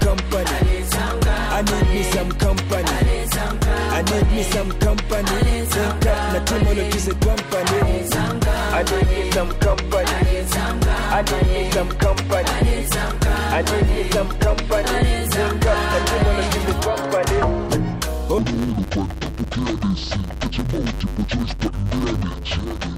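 From 18.38 s to the end, interleaved audio is read as planar in 10 ms blocks, giving a dull, robotic buzz at 100 Hz rather than a clean octave drop.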